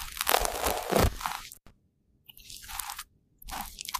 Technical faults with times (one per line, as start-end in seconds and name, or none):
1.01-1.40 processor overload crackle
1.53-1.70 intermittent contact